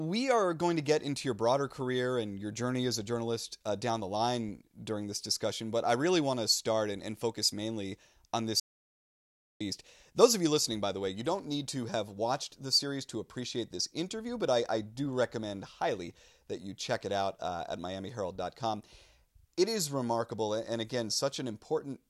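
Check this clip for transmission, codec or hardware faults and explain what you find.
One fault is present. An audio dropout to silence runs from 8.60 to 9.61 s, right after "focus mainly on this", erasing about 1.0 s of speech. The input was likely lost while recording continued, so silence was written: speech stops abruptly, leaving total silence without room tone, then resumes mid-flow.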